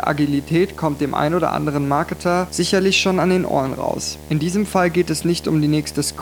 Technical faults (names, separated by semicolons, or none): video or display buzz